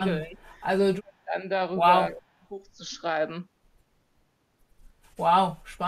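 The speech ducks three times: a gentle dip of about 10 dB from 0.22 to 0.35 s, a deep cut of around 30 dB from 0.99 to 1.34 s, and about 20 dB from 2.09 to 2.45 s. That's likely speech suppressed in double talk, with the echo canceller mistaking overlapping talk for echo and pulling everything down.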